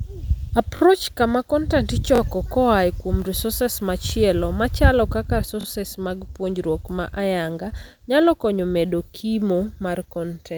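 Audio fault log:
0.77 s, 2.16 s, 4.10 s, 5.61 s: repeated buffer. A 21 ms slice, which fits a 1024-sample buffer, replays twice (once at 4.10 s). The result is a brief stutter, seen as identical waveform blocks with vertical spectrogram edges at each hard join.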